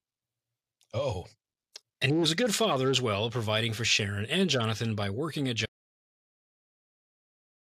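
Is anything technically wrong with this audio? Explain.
Yes. From 5.66 s to the end there's an audio dropout to silence: the speech cuts off into silence, no room tone, likely from the input being lost while recording continued.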